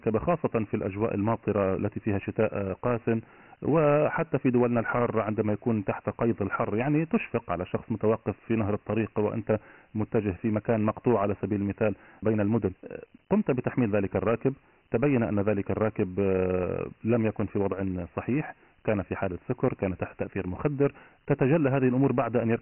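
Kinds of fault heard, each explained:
Dialogic VOX ADPCM: The speech has been squeezed into a 4-bit adaptive differential code, leaving nothing above 3 kHz, which fits a 6,000-sample-per-second telephony rate. Heavy quantisation grit rides along with each syllable, giving the voice a rough, hissy edge throughout.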